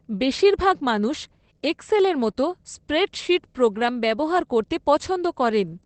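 The speech runs through Opus voice compression for its whole length, with the linear-prediction coder working in wideband at what sounds like a low bitrate, around 12 kbps. Nothing survives above about 8.6 kHz, so the voice is plainly muffled, with a coarse, hoarse, slightly robotic texture.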